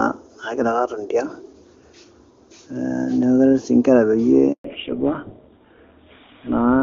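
At 4.52 s the speech cuts out in a handover gap lasting 120 ms, until 4.64 s. While the call was passed from one network to another, no speech frames got through, so the sound fades within a few tens of milliseconds and then drops to silence. On a waveform this is a flat line between two bursts of signal. On a spectrogram it is a clean vertical blank band spanning all frequencies, and whatever was said in that gap is lost.

Straight after, from 4.64 s to the end, the audio shows a fallback to narrowband. Before the gap the call sounds like high-rate AMR-WB HD Voice, clear and full up to about 7 kHz with at most faint coding traces. Afterwards nothing remains above 4 kHz, and the speech turns duller and rougher, which points to an older narrowband codec such as GSM full rate. On a spectrogram the upper energy ends abruptly at 4.64 s, leaving a hard ceiling at 4 kHz.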